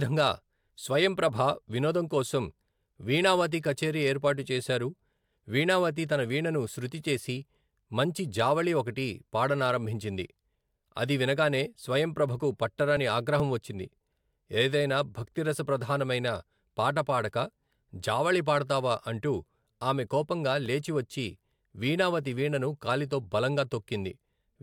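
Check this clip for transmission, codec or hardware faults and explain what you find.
Nothing in the speech signal points to a problem introduced by transmission, encoding or the recording hardware, and its continuity holds steady throughout.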